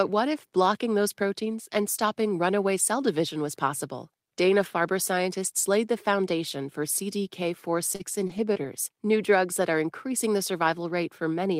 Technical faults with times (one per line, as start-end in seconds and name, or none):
7.95-8.01 short concealed packet loss
7.99-8.01 lost packet rebuilt from error correction
8.27-8.62 short concealed packet loss
8.29-8.66 lost packet rebuilt from error correction